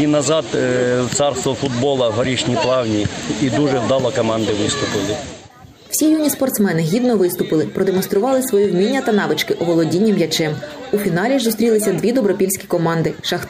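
No technical faults can be heard anywhere in the clip, so there are none to describe.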